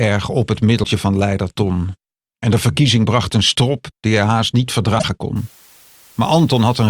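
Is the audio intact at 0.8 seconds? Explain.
No. From 0.82 to 0.85 s there is damaged data in the compressed stream: corrupted bytes make the decoder misread those frames, lose sync and search for the next valid frame header. That 30 ms disruption comes through as a short chirp or blip.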